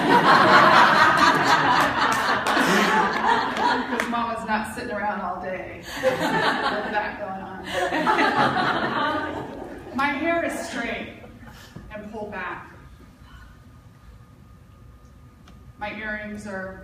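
No faults can be heard anywhere in the clip.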